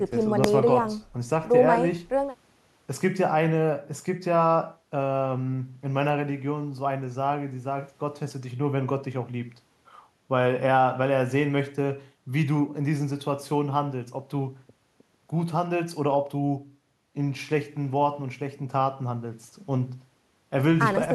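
At 0.44 s there's a single sharp bang, a case of invalid numbers at full scale. Some calculation blew up into infinite or invalid values that got pinned to the maximum level. The block is tiny, under a millisecond and consistent with a 32-sample block, so you hear one hard click.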